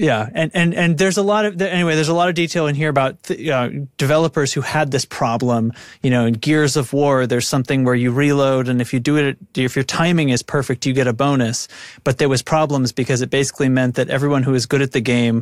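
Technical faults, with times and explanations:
Nothing stood out on listening to this speech recording.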